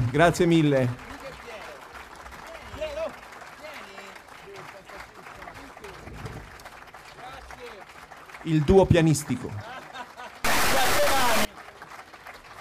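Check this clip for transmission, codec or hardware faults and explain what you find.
One hardware fault is audible. From 10.45 to 11.45 s there is a stuck bit: added noise and buzzy distortion that follow the waveform, with noise in quieter moments. The likely cause is one data line held fixed, offsetting about half the samples by a step of roughly -20 dBFS.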